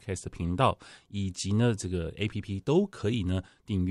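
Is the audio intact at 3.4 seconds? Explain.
Yes, the speech at 3.4 seconds is intact, with no dropout, glitch or distortion at that point.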